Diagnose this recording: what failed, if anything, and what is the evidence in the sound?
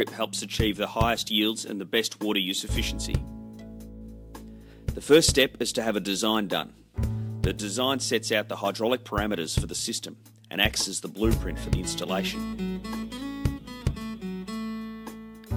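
The fault sits at the sample-rate conversion stage: crude rate conversion, running the whole way through. A gritty, inharmonic fizz rides on the louder and brighter moments, roughly 20 dB under the sound. Samples were simply repeated, no filtering, in a fixed pattern that fits a 32 kHz to 48 kHz step.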